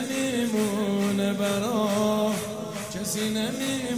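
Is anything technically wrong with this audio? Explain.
No, nothing is technically wrong with this audio.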